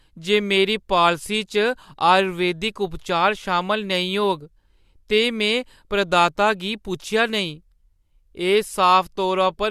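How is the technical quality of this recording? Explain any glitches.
No glitches or technical faults can be heard anywhere in the recording, and the signal stays steady and intact throughout.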